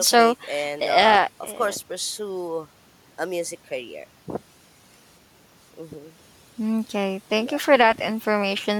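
Speech recording with no audible technical faults anywhere in the clip.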